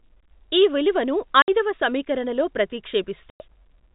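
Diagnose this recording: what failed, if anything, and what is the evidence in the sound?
Network stage: packet loss filled with silence. The speech cuts to silence at 1.42–1.48 s, between "ఈ విలువను" and "ఐదవ సమీకరణలో", and again at 3.3–3.4 s. The 60 and 100 ms gaps fit whole 20 ms packets. Hard edges rather than smeared concealment show the holes were filled with silence.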